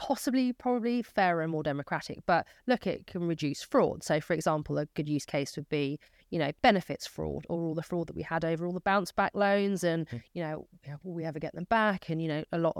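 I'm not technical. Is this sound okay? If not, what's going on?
Yes, nothing in this recording points to a technical problem with the signal.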